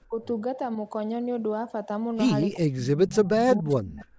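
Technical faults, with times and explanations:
0.09–0.24 s and 2.59–4.09 s, speech suppressed in double talk: a short dip of about 15 dB near the start, then a deep drop of around 30 dB lasting 1.5 s, likely the echo canceller muting the talker along with far-end echo.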